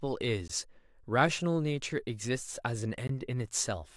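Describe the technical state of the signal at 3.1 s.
A block of digital silence runs from 3.07 to 3.09 s: 20 ms of speech drops abruptly to silence and back, heard as a short hole.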